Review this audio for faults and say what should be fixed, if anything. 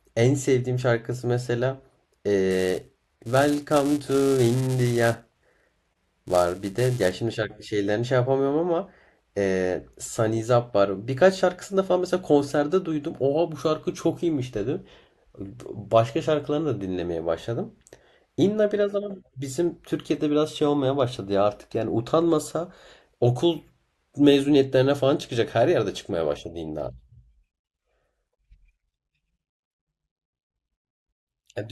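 From 2.50 s to 7.14 s the speech carries a filter restarted on every block fault: a steady 375 Hz buzz, which fits a 128-sample block. Because the filter loses its stored state at each block boundary, every block opens with a small transient, and those repeating transients form the buzz. Unlike buffer dropouts, there are no gaps, and the buzz rises and falls with the speech level. To prevent it, keep the filter's state between calls rather than resetting it per block.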